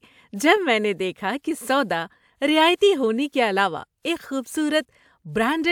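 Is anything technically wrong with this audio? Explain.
No, nothing technically wrong can be heard in this speech recording. There is no technical problem to explain.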